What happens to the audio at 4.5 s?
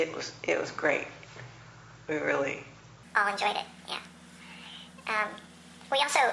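At 4.5 s the audio is inside a wrong sample rate span from 3.03 s to the end: playback runs 1.5 times fast, raising pitch 7 semitones, consistent with 16 kHz material played at 24 kHz.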